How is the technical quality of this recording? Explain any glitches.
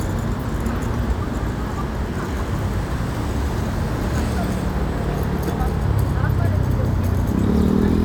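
Nothing to flag: no technical faults can be heard anywhere in these sounds.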